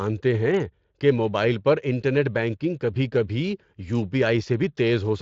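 No technical faults occur in this speech recording, which has passed through a Speex codec at a fairly high setting, so the band ends near 7.6 kHz, with the codec's mark on the sound staying light.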